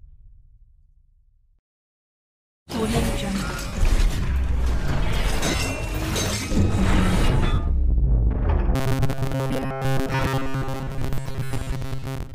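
At 3.67 to 3.73 s, 5.44 to 5.63 s and 7.54 to 7.58 s the sound briefly smears into a noisy wash before recovering. These are lost LE Audio frames: the LC3 decoder filled each gap by reusing the last spectrum with randomised signs. The first gap covers about 52 ms, the third about 45 ms, and the middle one scatters roughly 105 ms of losses across 180 ms, with the longest unbroken run around 40 ms.

From 8.76 s to the end at 12.35 s, the sound takes on a rigid, metallic buzz at 134 Hz. This is robotic sound from repeated short buffers, likely caused by audio arriving too seldom so that about 7.5 ms chunks were looped in place of most of the real signal.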